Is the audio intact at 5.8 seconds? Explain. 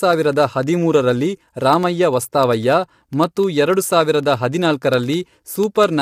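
No. Periodic USB or driver dropouts run from 0.13 to 5.93 s: every 0.1 s a tiny sliver of signal is replaced by silence, heard as regular ticks. Low-delay AAC compression is also present throughout, likely AAC-ELD at 32 kbps, whose low bitrate leaves the speech plainly rough and grainy.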